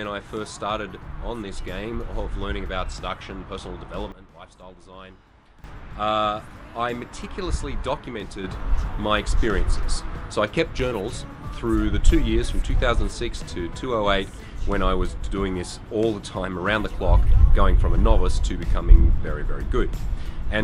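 At 4.12 s the level drops by about 13 dB in a single step, then snaps back at 5.64 s. At 8.44 s it jumps up by about 6 dB and stays there to the end. Each is a sudden gain jump. Background noise shifts with the sound, likely from unramped digital gain changes.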